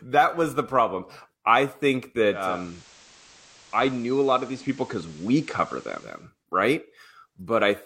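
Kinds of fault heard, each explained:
Digital radio blending to analogue: after "the problem I think", at 2.28 s, the receiver cross-fades over 345 ms to the FM broadcast, returning at 6.31 s. A spectrogram shows a hiss floor about 25 dB below the signal, and the waveform drops about 1 dB.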